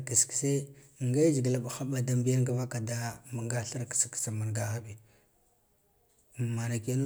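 Listening to this speech recording, nothing stood out as a technical problem anywhere in it.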